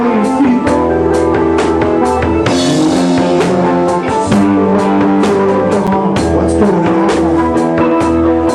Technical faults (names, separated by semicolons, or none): gap at a join of encoded pieces